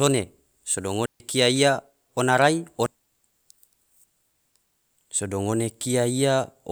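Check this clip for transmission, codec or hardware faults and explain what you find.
One transmission fault stands out: a digital wireless dropout from 1.06 to 1.20 s. The receiver lost too much of the incoming data stream and muted its output for about 142 ms, fading down and back up almost instantly. The speech simply vanishes into a clean hole of near silence. Unlike an analogue radio dropout, no hiss or static burst surrounds the gap, and unlike codec packet-loss concealment, nothing is smeared or synthesised to fill it.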